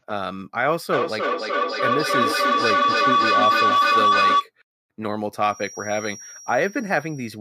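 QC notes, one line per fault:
0.93–4.49 s, feedback howl: a tone near 1 kHz swells until it peaks about 5 dB above the speech, pulsing roughly every third of a second. Each pass through a microphone-to-loudspeaker loop adds level, so repeats grow, narrow to the favoured frequency and keep cycling.
5.41–7.40 s, feedback whistle: a thin, steady 5.7 kHz tone sits about 20 dB below the speech and runs to the end of the clip, swelling and fading slowly in level. This is likely a speaker-to-microphone loop poised right at the edge of feedback, sustaining without running away.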